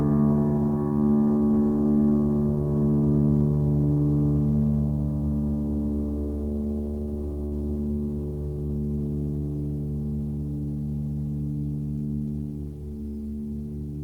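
A music clip with two network-style glitches close together. At 7.45 to 7.54 s there's a burst of packet loss: a run of packets never arrived in time, so the receiver kept the last bit of music going for about 60 ms, fading it out, then jumped ahead. When the music picks up again, roughly 60 ms of the original is simply gone, so you hear a small skip right after the smear. Then at about 8.67 to 8.72 s there's a short stall from a late packet. One packet showed up behind schedule, the jitter buffer ran dry, and the player stretched the previous sound for about 27 ms until it landed. Nothing is lost this time. Playback resumes from the same spot, just 27 ms later than before, so what you hear is a brief held moment with a faint buzz or dip rather than a jump.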